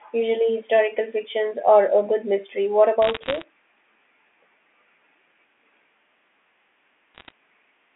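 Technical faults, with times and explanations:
3.02–3.44 s and 7.15–7.32 s, bit errors on a digital phone line: two bursts of sharp ticks and crackle over otherwise unchanged speech. Under one percent of the bits on the G.711 mu-law line flip, each corrupting a single sample; hits on sign or high-order bits throw that sample far off, producing the clicks against the 3.5 kHz telephone band.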